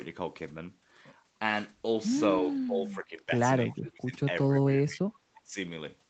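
Speech suppressed in double talk first appears from 2.42 to 3.32 s: the speech sinks by up to about 20 dB and thins out in pieces, most likely because an echo canceller, hearing both sides at once, could not tell this talker from loudspeaker echo and attenuated everything. Echo leak follows at 3.69 to 3.76 s, a faint scrap of the speech returning 337 ms late at about 30 dB below the direct sound, probably residue a far-end loudspeaker setup failed to cancel. Double-talk suppression returns at 3.71 to 4.2 s and 4.86 to 5.06 s, with dips near 25 dB. A second echo-leak scrap at 5.34 to 5.41 s, again delayed 337 ms, overlaps a final suppression at 5.35 to 5.57 s of about 20 dB. Throughout, the audio carries nothing above 8 kHz, consistent with a narrowed call codec bandwidth.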